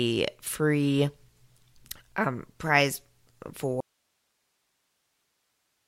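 The wanted signal was likely lost at 3.81 s while the path after the break stayed live, giving an audio dropout to a faint residue. The speech cuts off abruptly and never returns, leaving only hiss roughly 50 dB below the speech level until the end.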